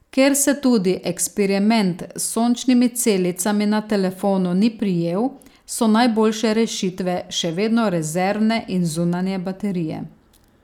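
A speech recording with nothing technically wrong to point out anywhere in it.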